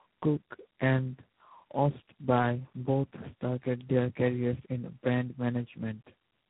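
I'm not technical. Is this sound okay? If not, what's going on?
No, not quite. The whole clip suffers from what's called tandem speech coding. The call crossed three phone networks that each squeeze speech with their own compression scheme, so it was unpacked and squeezed again at every handover. Each step works on the already worn copy from the one before, so the speech comes out rough, muffled and warbly from start to finish, with nothing left above about 3.9 kHz.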